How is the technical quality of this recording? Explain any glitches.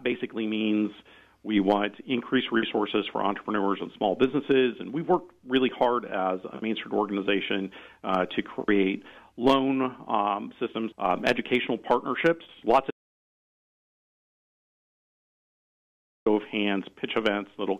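There is one clear glitch. An audio dropout to silence runs from 12.91 s to 16.26 s, about 3.35 s. The input was likely lost through a disconnected device, failed link or mute, so silence was written. The sound cuts off abruptly into total silence with no room tone, then returns mid-flow, and whatever occurred in that gap is gone.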